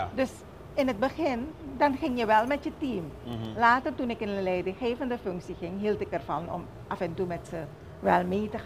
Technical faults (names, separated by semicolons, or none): bit error spike